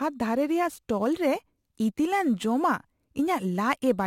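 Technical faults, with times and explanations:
Throughout, crude rate conversion: unfiltered sample dropping, fitting a 48 kHz to 44.1 kHz change, adds a gritty inharmonic fizz about 30 dB below the speech.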